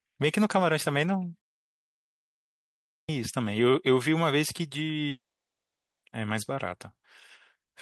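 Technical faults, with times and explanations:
2.93–3.09 s, clipped start after a pause: after 1.6 s of quiet the output seems to have dozed off, so the first 157 ms of speech is swallowed and it begins abruptly.
5.09–6.05 s, long network dropout, likely: nearly a second never arrived, a brief fading fill starts the gap, then about 0.85 s of silence before the speech resumes, with that part missing.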